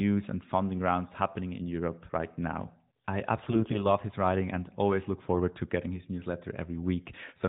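From 3.42 to 3.87 s, AMR bit errors hit the narrowband mobile stream: a few percent of the weakly protected bits flipped while the frame checks still passed, misplacing excitation pulses and skewing fine pitch, gain and spectral values. The speech keeps its pitch and level but turns hoarse, scratchy and gargly.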